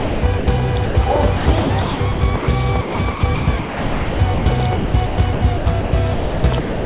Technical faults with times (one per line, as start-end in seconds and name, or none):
0.00-0.47 sound chopped by the voice detector
0.86-0.95 sound dropped by the voice detector
1.37-2.48 sound chopped by the voice detector
2.81-4.46 sound chopped by the voice detector
4.76-6.86 sound chopped by the voice detector